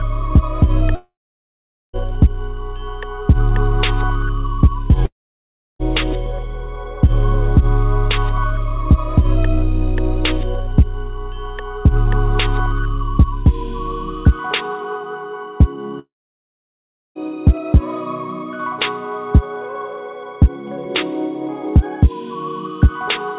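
At 0.95–1.96 s, 5.05–5.82 s and 15.99–17.18 s, the sound collapses into a brief fading buzz and then silence, likely a long network dropout losing up to 1.17 s.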